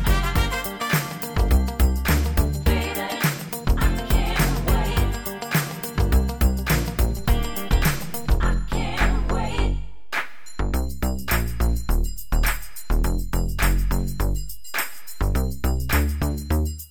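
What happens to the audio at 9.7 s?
At 9.7 s the sound carries on unchanged, but it sits inside a DC step: a low thump at 7.19 s marks the waveform's zero line jumping by about -30 dBFS, held until a second thump at 15.99 s when the offset drops away.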